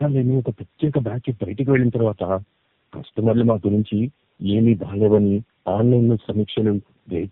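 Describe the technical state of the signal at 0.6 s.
At 0.6 s you're hearing tandem speech coding, which runs the whole clip: about three low-rate speech codecs stacked, each recoding the last one's damage, so it's rough, warbly and cut off above 3.7 kHz.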